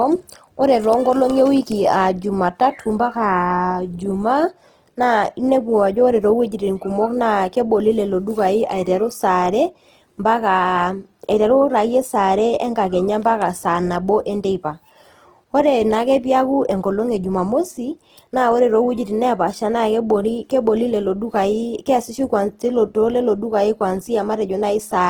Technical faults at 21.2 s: Opus compression

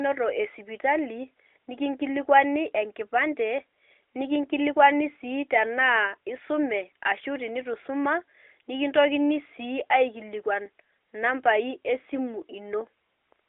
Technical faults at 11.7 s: none

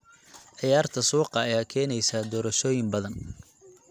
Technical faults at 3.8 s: none

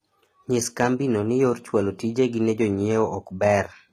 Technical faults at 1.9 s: HE-AAC compression

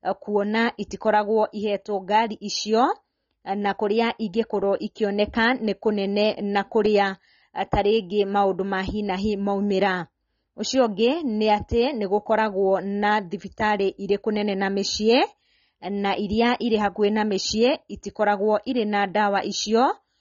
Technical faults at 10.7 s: AAC compression

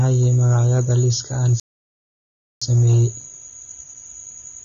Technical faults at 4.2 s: AAC compression

